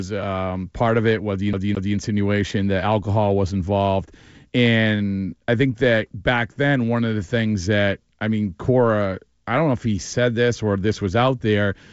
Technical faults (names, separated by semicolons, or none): CD stuck on one turn